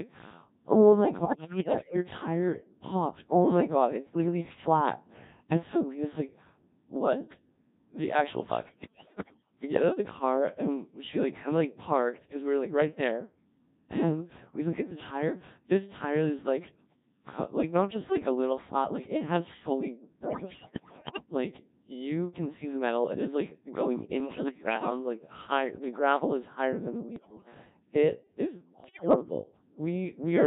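Speech coded throughout by the Codec 2 vocoder, heavily degraded at a very low rate that fits roughly 1.3 kbit/s. The voice is rebuilt from sine waves using only pitch, voicing, level and envelope, so it sounds robotic and buzzy. A spectrogram shows rigid, comb-like harmonic stripes with smeared formants and little natural noise. Bit errors on digital voice radio hit six bursts: 1.17–1.96 s, 8.68–9.51 s (before "we get out of"), 20.20–21.26 s (between "like it has fully" and "like you can see"), 24.20–24.90 s (between "it is like going" and "like high the gravel"), 27.16–27.54 s and 28.84–29.16 s. The errors are heavy except a milder one at 24.2 s. Corrupted frame parameters make the voice jump in pitch and level, producing bleeps and warbling gibberish, seen as erratic harmonic jumps and blocky level steps.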